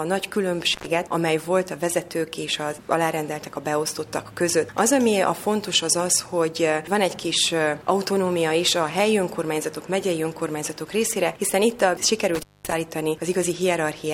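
An intermittent contact opens the signal path twice, as if a loose plug or cable briefly loses its connection. From 0.73 to 0.86 s the line drops out for about 94 ms, and from 12.35 to 12.72 s for about 220 ms. Each time the sound cuts off abruptly with crackle as the contact breaks and remakes, and faint hiss remains during the open gap.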